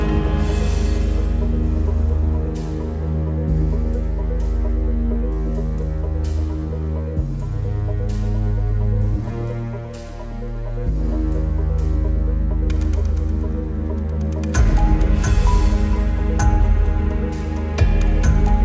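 No faults can be heard anywhere in this audio.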